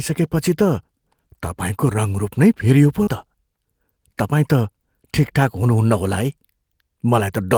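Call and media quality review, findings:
Short concealed packet loss, 3.03–3.10 s: brief smear in the speech, about 40 ms lost in jitter buffer/network; decoder extrapolated from preceding audio, then cross-faded back.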